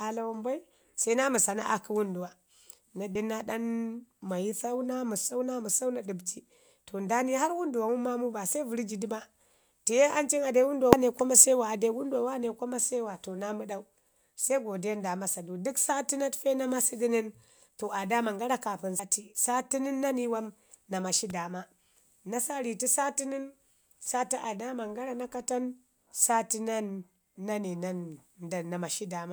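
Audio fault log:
3.13–3.16 s, 10.93 s, 18.99 s: damaged data in a compressed stream. Short glitches just before "den na", just before "kwa mase wa ade" and right after "daman gara kaapən", where corrupted frames knock the decoder out of sync until it finds the next frame header.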